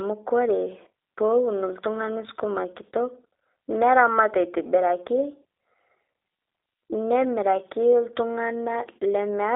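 From start to finish, the speech carries the sound of the G.729 codec, in its G.729A form at 8 kbit/s. The codec rebuilds each stretch of speech from a vocal tract filter, a pitch predictor and a few pulses per frame. The line band runs from 300 Hz to 3.7 kHz, and nothing above 3.8 kHz survives. The damage is plainly audible. Voices sound thin, slightly rough and synthetic.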